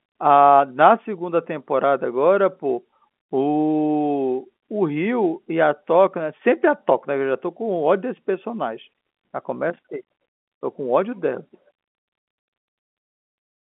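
There are no technical faults to describe at any point in the speech, which is carried over an ordinary telephone channel.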